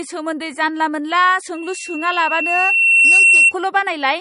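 Loudspeaker feedback squeal runs from 1.54 to 3.53 s in this speech recording: a steady 2.7 kHz tone swells over roughly one and a half seconds until it sits about 10 dB above the speech. A microphone is hearing the loudspeaker it drives, and at 2.7 kHz the loop gain exceeds one, so that frequency keeps reinforcing itself until the loop is broken. MP3 compression damage is plainly audible throughout. Nothing is left above 10.6 kHz, and the speech has a watery, swirling texture as weak spectral detail flickers in and out between frames. These are likely the marks of MP3 encoding at a low bitrate, which fits about 40 kbps, where the encoder runs short of bits, cuts the treble at a fixed frequency and discards quieter components.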